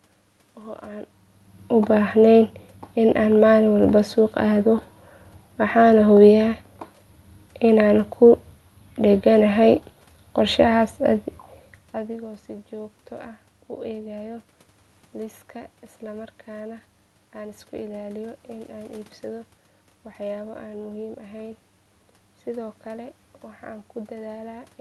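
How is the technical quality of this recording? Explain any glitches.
No glitches can be heard in the recording. The speech has come through a call codec that sounds consistent with Opus, with its top end stopping at about 12 kHz, and the room's background noise and the level changes as the talker moves, about a second in and again around 11.5 s, belong to the recording itself.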